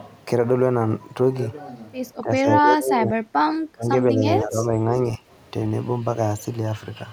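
From 2.21 to 3.19 s the speech dips in pieces, losing about 15 dB at its deepest and affecting around 0.7 s in total. This is speech suppressed in double talk, likely an echo canceller turning down the near talker while both sides spoke at once. Shorter dips follow at 3.72 to 3.86 s (about 25 dB), 4.12 to 4.23 s (a slight 5 dB) and 4.43 to 4.92 s (about 10 dB). Unlike a leak, nothing extra is heard; the voice itself goes missing.

Inside the first dip, at 2.57 to 2.61 s, a brief echo leak appears: a faint copy of the voice trailing 188 ms behind, about 10 dB under the speech, likely because the far end's canceller let some loudspeaker pickup through. Its mark is the added, delayed repetition, where suppression only takes sound away.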